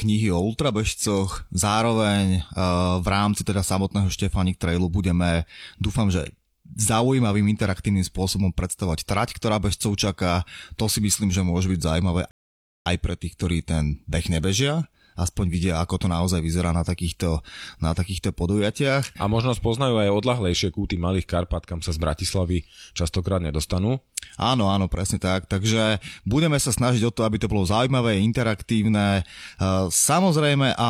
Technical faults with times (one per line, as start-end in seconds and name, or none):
12.31-12.86 rebuffering stall